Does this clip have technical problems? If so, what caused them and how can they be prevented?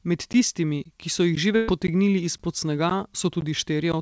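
Yes. There's a gap between chunks: short hard-edged holes of about 13 ms at 0.33, 0.84, 1.35, 1.87, 2.38, 2.90, 3.41 and 3.92 s, right before "tistimi ki so" at the first one. The spacing points to half-second chunks with silence padded or left between each one. Playing chunks back to back from a continuous buffer, and trimming any codec padding, would prevent it.

There's also a burst of packet loss from 1.56 to 1.69 s. About 120 ms of audio is missing, and the receiver covered it by stretching and fading the last sound before jumping ahead. It comes through the call path, which carries nothing above 8 kHz, consistent with G.722 at 64 kbps. A deeper jitter buffer or forward error correction would prevent it.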